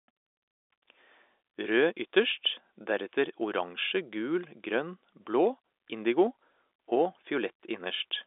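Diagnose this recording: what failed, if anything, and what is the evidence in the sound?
Nothing failed in this recording.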